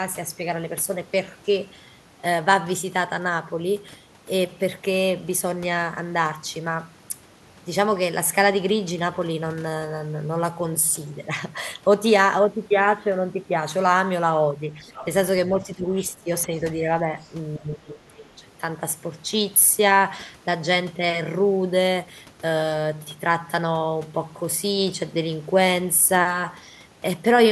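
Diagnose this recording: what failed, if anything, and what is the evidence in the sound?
Call processing is where this fails, with speech suppressed in double talk between about 14.8 and 18.1 s. The talker's level dips at 14.81–14.94 s and 16.47–16.54 s (about 5 dB), then more deeply at 15.47–16.31 s (about 15 dB) and 17.59–18.14 s (about 20 dB). These are likely an echo suppressor that mistook near speech for echo and turned everything down. On a waveform the envelope drops in these stretches. A spectrogram shows harmonics and high bands fading out in these gaps.

The same echo canceller also lets the other side's voice leak through, in short scraps at 14.87–15.06 s (about 15 dB below the talker), 17.21–17.30 s (about 35 dB below) and 18.16–18.25 s (about 25 dB below). The likely cause is residual loudspeaker echo that the adaptive filter failed to cancel while both sides were active. 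A spectrogram would show unrelated harmonic traces laid over the talker or filling the suppression gaps. The waveform shows low-level bursts there.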